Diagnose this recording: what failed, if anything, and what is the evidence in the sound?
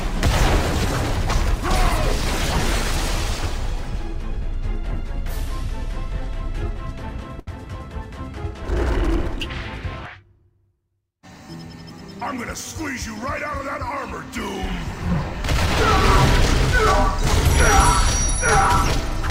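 Network stage: a short stall from a late packet at 7.39 to 7.49 s. The jitter buffer ran empty, so the receiver stretched the last sound 78 ms until the packet came, then resumed in place. Nothing is lost, but the sound drags briefly and runs 78 ms later afterwards.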